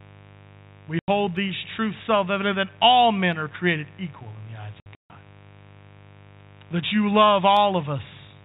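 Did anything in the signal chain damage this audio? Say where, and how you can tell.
Yes. Mains buzz runs through the whole clip, a steady raspy buzz on a 50 Hz fundamental sitting roughly 25 dB below the speech. This points to the analogue wiring. A dimmer, rectifier or unshielded cable is injecting sharp switching spikes twice per mains cycle, and these spread into a ladder of 50 Hz harmonics.

Packet loss filled with silence causes two holes, both from the network stage. The first is a clean 90 ms gap from 0.99 to 1.08 s. The second, between 4.8 and 5.1 s, removes 210 ms in scattered pieces over 300 ms, with the longest run 150 ms. The receiver substituted silence for missing packets, and these gaps fit a 30 ms packet size.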